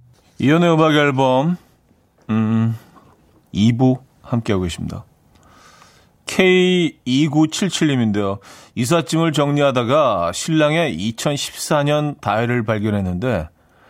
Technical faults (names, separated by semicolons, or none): none